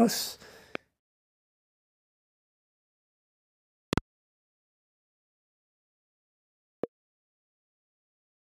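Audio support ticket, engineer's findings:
Loud pop, three events. Likely voltage transients entering the chain (switch, loose plug, static discharge or driver glitch), shaped by downstream stages into short pulses. 0.75–0.78 s: single sharp pop, about 15 dB above the signal. 3.93–4.00 s: two pops in quick succession, peaking about 20 dB above. 6.84–6.86 s: single pop, about 15 dB above. Each is heard as a thump on top of the audio, which continues underneath.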